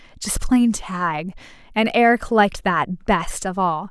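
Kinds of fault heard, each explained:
No technical fault can be heard anywhere in the speech recording, so there is nothing to list.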